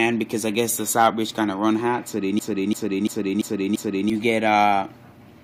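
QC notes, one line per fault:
2.39–4.10 s, system hang loop: one 341 ms slice repeats exactly five times at 2.93 Hz, a machine-gun stutter. The system froze while the hardware kept replaying what fits a 16384-sample buffer. Exact repeats rather than silence set it apart from a dropout; about 1.5 s is lost.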